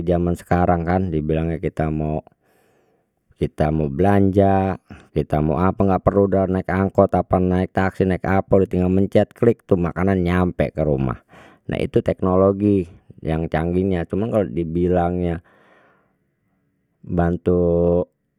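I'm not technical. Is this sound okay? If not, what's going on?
Yes, this sound is okay; there's nothing going on with it that needs attention.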